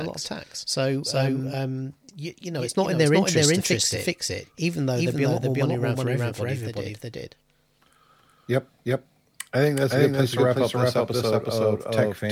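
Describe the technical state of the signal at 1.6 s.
At 1.6 s you're hearing a doubled audio track, and it runs through the whole clip rather than just this moment. A second full-band copy of the speech trails the original by around 400 ms at roughly the same loudness, so everything is stated twice. There's no decay or room colour on the echo, just a dry duplicate out of step. The likely cause is a slower second capture path or an edit holding two misaligned copies.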